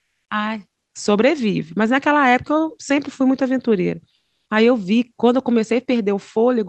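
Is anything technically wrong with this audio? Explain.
Yes. From 0.00 to 0.25 s, and again from 4.15 to 4.45 s, the background turns into flat, featureless hiss, about 6 dB and then about 11 dB quieter. This is comfort noise in place of the background, likely from discontinuous transmission: the sender stopped sending audio, and the receiver filled in synthetic noise.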